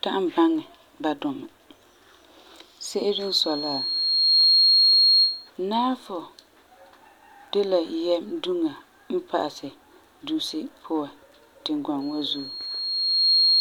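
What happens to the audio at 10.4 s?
Nothing goes wrong at 10.4 s; the speech continues intact through that moment.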